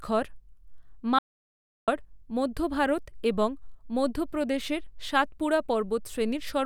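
At 1.19 s the speech drops out to dead silence until 1.88 s, about 0.69 s of silence with no room tone, then resumes mid-flow on "মধ্য ভারত এবং মধ্যপ্রদেশের". That's an audio dropout to silence, likely a briefly lost input while recording continued.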